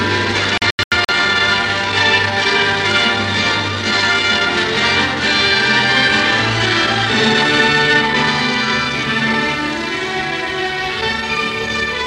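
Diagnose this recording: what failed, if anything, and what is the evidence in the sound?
Digital broadcast dropout in reception: from 0.58 to 1.12 s failed frames muted, leaving holes up to 85 ms, flat waveform gaps, blank spectrogram columns.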